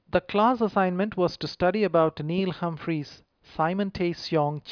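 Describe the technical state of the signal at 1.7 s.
At 1.7 s the signal is intact, with no dropout, distortion, glitch or other audible fault at that point in the speech.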